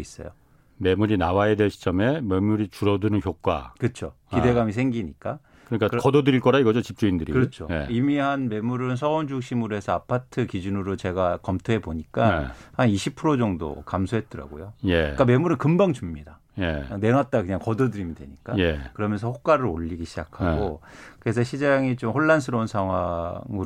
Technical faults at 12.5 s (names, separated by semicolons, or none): none